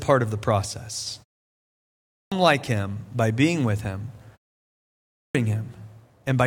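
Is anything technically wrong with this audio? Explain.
Yes. Two kinds of fault affect this speech clip.

From 0.66 s to 1.07 s there is a sudden gain jump. The level drops by about 4 dB in a single step, with no ramp. Speech and background fall together. The likely cause is a digital gain setting applied instantly.

At 1.85 s and 4.89 s there is a clipped start after a pause. Each follows a silence of about 0.7 s and 0.6 s. The output device sleeps in silence and wakes too slowly. About 470 ms and 460 ms are swallowed, so speech begins abruptly.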